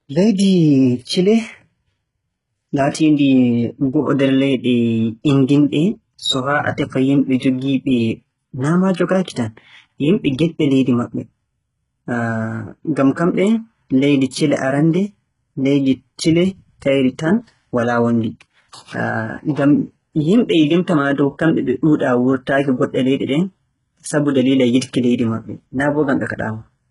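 Throughout the clip the treble sounds synthetic rather than recorded. The upper band is rebuilt from copies of lower bands, so its harmonics do not line up with those below the crossover, and s sounds come out gritty, metallic or lispy. Nothing is present above 11.1 kHz. The codec damage is heavy. This is likely HE-AAC compression, the v2 variant at a bitrate around 12 kbps, where only the lower spectrum is coded and spectral band replication supplies the top end under a coarse envelope.

From 7.39 to 7.42 s there is pre-echo. A short hiss, spread over about 25 ms, runs ahead of a sharp attack, and the attack itself sounds softened and smeared. The transform codec distributes quantisation noise across its whole block. Noise sized for the loud onset late in the block therefore also fills the quiet stretch just before it.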